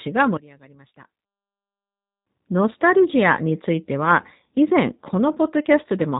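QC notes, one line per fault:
Throughout: G.729 codec. The speech is band-limited, with nothing above about 3.8 kHz, and carries plainly audible coding damage: a rough, slightly synthetic texture. The band limit and the character of the artefacts are consistent with an 8 kbit/s G.729-family coder. It discards the waveform and rebuilds each 10 ms frame from a vocal-tract filter, a pitch predictor and a handful of pulses, so fine detail and high-frequency content are lost.
0.37 s to 1.77 s: one channel inverted. The speech drops by about 22 dB, collapsing to a faint residue before the level returns at 1.77 s. The likely cause is reversed polarity on one stereo channel during this span with the signal then summed to mono. The centred speech is nearly identical in both channels, so the two copies cancel. Only the small inter-channel difference survives, which is why the audio turns faint rather than going fully silent.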